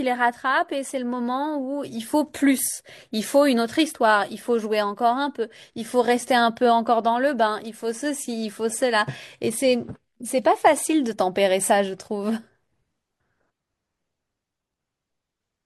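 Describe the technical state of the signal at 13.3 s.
Around 13.3 s the speech signal is intact, with no fault audible at that moment.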